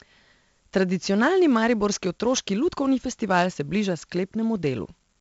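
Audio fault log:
Throughout: 4-bit ADPCM compression. Coarse 4-bit prediction steps leave heavy gritty hiss tracking the speech level, and nothing above 7.7 kHz, which fits a 64 kbps stream.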